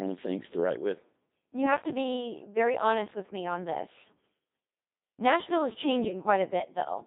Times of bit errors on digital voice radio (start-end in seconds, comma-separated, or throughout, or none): 6.03-6.23